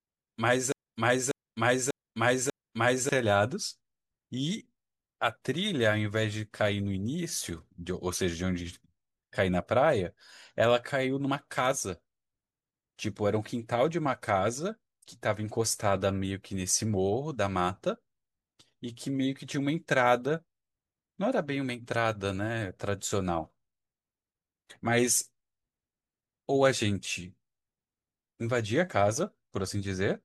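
At 0.72 s the speech falls into a broken-record loop that runs until 3.09 s. A fragment of about 0.59 s plays four times back to back, each repeat identical, so the audio stutters in a rigid cycle instead of moving forward. The likely cause is a stalled player, encoder or stream that kept resending the last fragment in its buffer. Whatever should have been heard during those seconds is missing.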